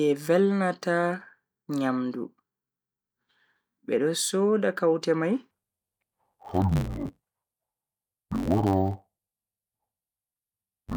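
From 5.51 s to the end, the speech turns dull and robotic. That's interleaved audio read as planar. Each 10.67 ms block of alternating left-right samples gets split in half, first half treated as left and second as right, so both play at half speed. Blocks this short don't give a clean octave drop. Instead you hear a buzz at about 93.8 Hz, the block rate, which fits a 512-sample buffer at 48 kHz.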